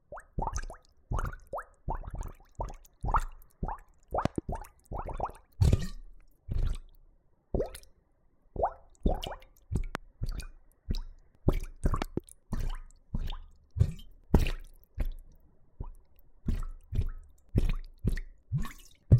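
At 4.25 to 4.40 s, a loud pop arrives as a double hit. A single pop follows at 9.95 to 9.97 s. Another pair sounds at 12.02 to 12.20 s. Each peak stands around 20 dB above the sound. The cause is likely a sudden voltage step or spike, perhaps from a switch, a plug, static or a driver glitch. The circuits downstream shape that pulse into a sharp thump. The sound carries on underneath each one.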